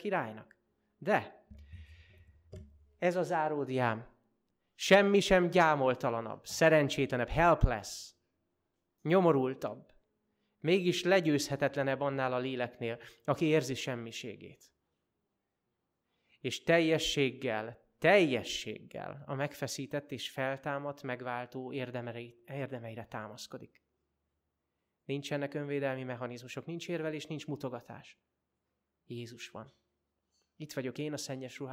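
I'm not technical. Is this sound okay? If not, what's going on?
Yes, nothing wrong turns up anywhere in this recording, so there's nothing to fix.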